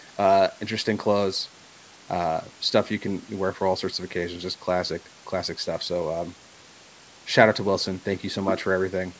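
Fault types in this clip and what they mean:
Nothing stood out on listening to this speech, which has passed through call microphone processing that leaves nothing above 8 kHz.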